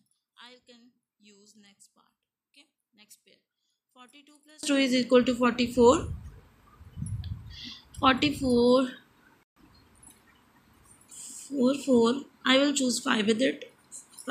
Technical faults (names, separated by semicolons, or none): one channel inverted